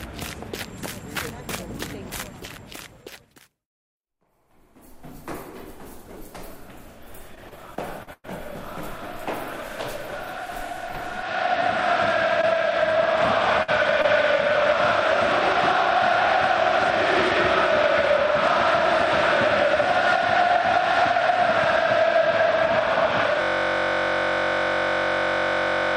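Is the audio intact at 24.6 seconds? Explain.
No. At 24.6 seconds the audio is caught in a steady, rough buzz at about 47 Hz: a 21.33 ms fragment repeating exactly, over and over. This is a system hang loop, running from 23.42 s to the end of the clip. The computer or its audio driver stalled while the sound hardware kept replaying the same small ring buffer, which fits a 1024-sample buffer. The loop is so short that the repeats fuse into a tone instead of a stutter.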